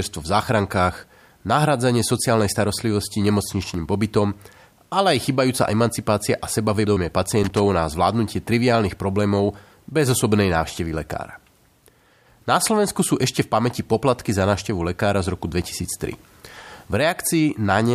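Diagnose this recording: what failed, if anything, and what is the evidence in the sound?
The analogue wiring is the culprit here: loose connector crackle, twice. The first burst runs from about 3.62 to 3.74 s, right after "nahradzanie sociálnej starostlivosti", and the second is longer, 7.32 to 7.59 s, just before "na zvládnutie triviálnych problémov". Both are ragged, irregular scratching rather than a clean click. That's a worn or dirty contact making and breaking as the plug shifts, chopping the signal and popping wherever DC sits on the line.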